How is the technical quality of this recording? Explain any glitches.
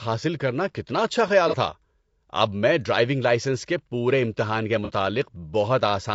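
The quality is fair but plainly coded, with two brief glitches.

Throughout, the speech sounds rough and grainy, with noise between harmonics and a synthetic top end, likely low-delay AAC compression (AAC-ELD) at roughly 32 kbps.

At 1.49–1.54 s and 4.85–4.91 s, AAC frame loss with concealment causes short smeared, noisy patches where the decoder rebuilt what sounds like a single missing frame from earlier spectrum.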